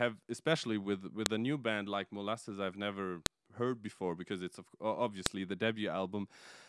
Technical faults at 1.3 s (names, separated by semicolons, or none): file header played as audio